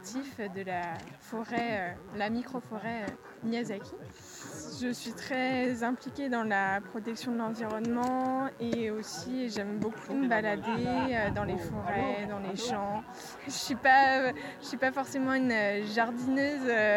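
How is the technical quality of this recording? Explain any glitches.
A steady, raspy buzz runs under the sound from start to finish, sitting roughly 30 dB below it. This is mains buzz at 60 Hz: sharp switching spikes, arriving twice per mains cycle from a dimmer, rectifier or poorly shielded cable, spread 60 Hz harmonics up into the kilohertz range, giving that gritty edge.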